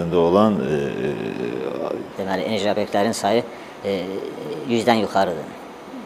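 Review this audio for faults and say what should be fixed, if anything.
From 2.12 s to the end of the clip, the audio runs at the wrong speed: it plays 1.23 times faster than the preceding material, and pitch rises with it by roughly four semitones, so the sound turns higher and more hurried at once. Because speed and pitch shift together, this is likely a section resampled or played against the wrong clock rather than a deliberate pitch effect. Re-render that section at the original rate. To prevent it, confirm that the sample rate and clock settings match across every edit and playback stage before export.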